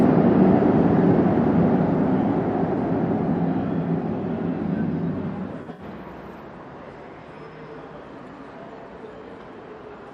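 Everyday sounds, with AAC frame loss with concealment. At 1.11 s, a 21 ms smeared, noisy blip fits one lost frame refilled from the last good spectrum. From 5.62 to 5.82 s, gaps totalling 107 ms (longest around 70 ms) dip and fade back, showing as blurred spectrogram bands and a sagging waveform envelope.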